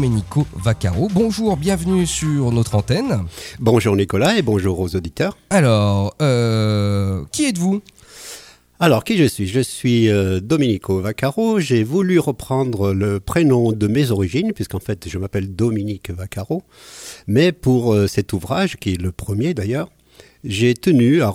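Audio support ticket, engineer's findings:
Video or display buzz: screen or video cable coupling into the audio path. Continuous buzz at the 60 Hz field rate with hash above it, low, around 40 dB under the signal, present throughout.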